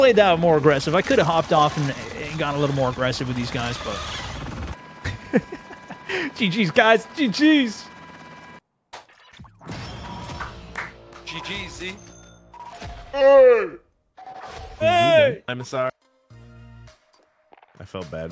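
From 12.73 to 14.79 s there's a wrong sample rate fault: the sound drops to about 0.73 speed and 5.6 semitones lower, which fits 22 kHz material played at 16 kHz.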